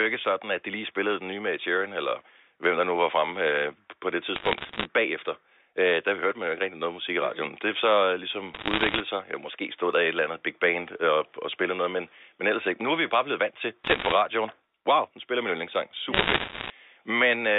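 Four bursts of bit errors on a digital phone line: 4.36–4.85 s after "på det", 8.54–9.00 s, 13.84–14.12 s after "bare blevet vant til", and 16.14–16.70 s after "nu spiller min yndlingssang". Flipped bits wreck single samples, so crackly ticks pepper the speech, densest in that last burst.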